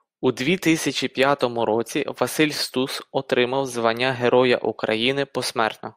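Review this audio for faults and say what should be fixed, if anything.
No faults; nothing needs fixing.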